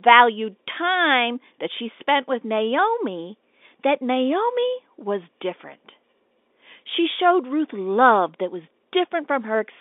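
No technical faults occur anywhere in this speech.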